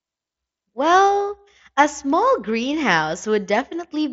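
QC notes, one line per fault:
No faults heard in this speech clip. The Bluetooth mSBC headset codec carries the speech up to about 8 kHz, with light grain on the louder sounds.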